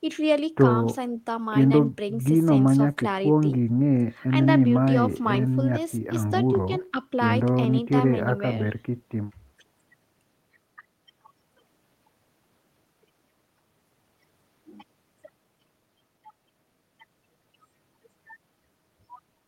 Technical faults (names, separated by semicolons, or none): none